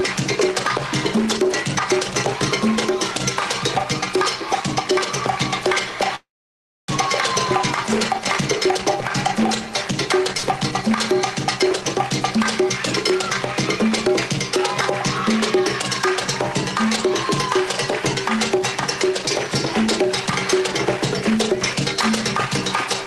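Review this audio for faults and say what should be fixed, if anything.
Call audio freeze, 6.15 to 6.90 s: the last sound is stretched into a fading fill, then drops to silence for about 620 ms. It resumes exactly where it stopped, adding roughly 0.73 s of delay with nothing missing. Packets were likely held up in transit, and the jitter buffer ran empty. Fixing stalls on the network path, or giving the jitter buffer more headroom, would prevent this.

Burst of packet loss, 10.37 to 10.45 s: about 60 ms of audio arrived too late or not at all. The receiver covered the gap with a short decaying extension of the preceding sound, about 59 ms long, then jumped ahead, so that stretch is missing. Enabling forward error correction or redundant packets would cover losses of this length.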